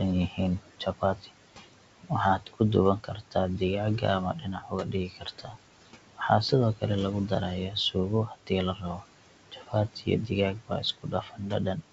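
Noise suppressor artifacts run through the whole clip. The suppressor pulls down every band it judges to be steady noise, about 18 dB at most, frame by frame. The room noise, sitting about 16 dB below the speech, sinks in the gaps and swells back under the talking. This pumping tracks the speech itself. The call path carries nothing above 8 kHz, which fits a wideband codec such as G.722.

Speech cut by the noise suppressor runs from 0.29 to 5.58 s, then again from 6.75 to 11.52 s, roughly one and a half seconds of affected sound in the first stretch and about one second in the second. The suppressor mistook quiet consonants and word endings for noise and turned them down by up to about 18 dB, so they sound swallowed or faint. Unlike a packet-loss dropout, nothing goes fully silent or glitches. Only the soft parts fade along with the background.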